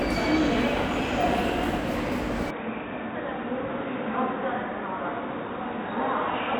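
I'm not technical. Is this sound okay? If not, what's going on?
No, not quite. At about 2.51 s the sound suddenly goes dull and a bit boxy, as if the top end got chopped off, with nothing coming through above about 3.8 kHz. It also drops a little in loudness and picks up a faint new background noise underneath. There's no gap at the change; it just flips and stays that way to the end. That's most likely an input switched to a poorer device, with the recording jumping to a cheaper mic or headset mid-take.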